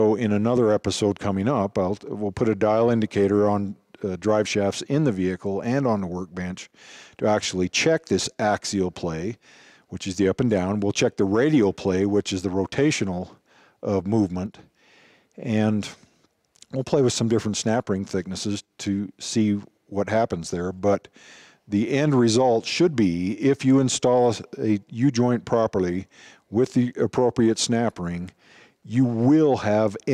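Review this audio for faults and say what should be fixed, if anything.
At 14.46 s the level drops abruptly by about 6 dB. It stays down until 14.59 s, about 130 ms, then snaps back. The likely cause is one channel drops out. One side of the stereo pair goes silent for that moment. After the mono sum, sound common to both sides keeps only half its amplitude. Anything carried only by the missing side disappears entirely. Secure cables and connectors, and watch both channel meters while recording.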